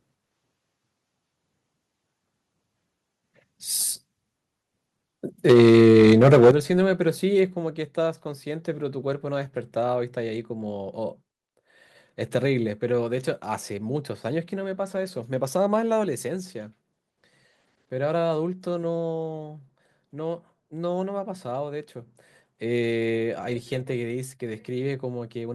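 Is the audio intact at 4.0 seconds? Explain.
Yes, at 4.0 seconds the speech plays through intact, with no fault audible at that moment.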